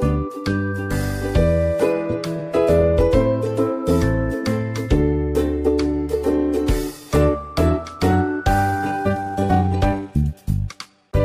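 The audio runs at a natural pace until 8.61 s. From there to the end it contains a time-stretched section. The pace jumps to about 1.35 times the earlier speed, but the pitch stays where it was. The sped-up stretch sounds rushed. The likely cause is software squeezing that part to fit a shorter length. It kept the pitch by dropping short pieces of audio.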